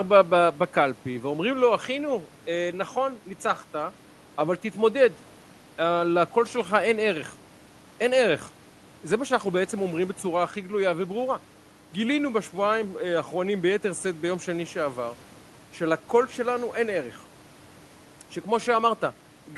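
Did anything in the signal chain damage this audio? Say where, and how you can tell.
No, nothing in the chain damaged this speech.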